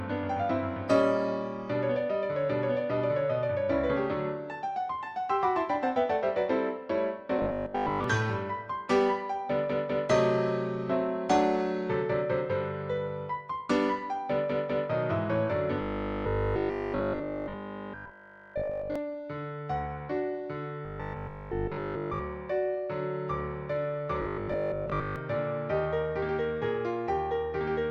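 A rigid, metallic 50 Hz buzz is heard at 7.38–8.04 s, 15.82–18.96 s, 20.85–22.21 s and 24.22–25.16 s. This is robotic sound from repeated short buffers, likely caused by repeating a 20 ms block in place of most of the audio, and all of it in the longest stretch.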